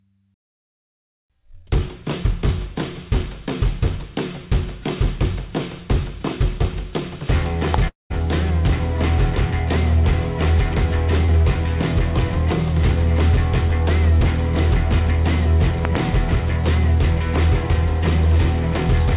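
At 7.74 to 7.76 s a single sharp crack rises about 15 dB above the sound, which carries on beneath it. This loud pop is likely a sudden voltage step, such as a switch or static discharge, added to the signal and briefly shaped by the circuitry after it.

From 7.88 to 8.12 s the sound smears into a fading buzz, then drops to silence for about 150 ms before resuming. About 220 ms went missing in this long network dropout, likely from packets that never arrived. The receiver extended the last sound and then gave up, and the lost stretch is never played.

At 11.26 to 11.33 s there is a brief wobble as short concealed packet loss patches a 20 ms hole. The receiver synthesised a continuation of the preceding sound and blended it back into the real audio, adding roughly 10 ms along the way.

At 15.85 to 15.97 s two pops land in quick succession, each about 15 dB above the sound, which continues underneath. 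This double loud pop is likely a repeated voltage spike, such as a connector glitch, riding on the signal. Throughout, nothing is heard above 4 kHz, which points to a narrowband call codec such as G.711 mu-law.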